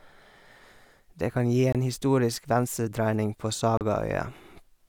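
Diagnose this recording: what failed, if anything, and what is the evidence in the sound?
Two brief dropouts to digital silence, one of about 23 ms at 1.72–1.75 s after "kan gi" and one of about 35 ms at 3.77–3.81 s after "historisk venstredreining på", point to a likely Bluetooth stall at the playback stage. The headphone buffer emptied while delayed packets were resent. Spectrograms show full-band vertical gaps, and waveforms flatline before resuming.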